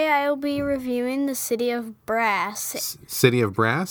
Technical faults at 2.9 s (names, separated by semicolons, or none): none